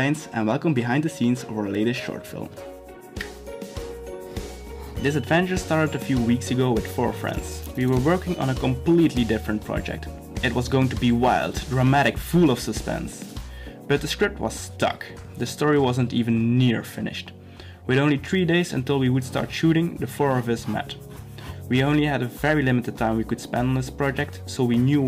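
The audio has hard clipping throughout its 25 seconds. It was driven about 4 dB past what one stage could pass, so roughly half a percent of samples were cut off flat. On a waveform the loudest peaks show squared-off tops. On a spectrogram, brief vertical smears of added high harmonics line up with those peaks.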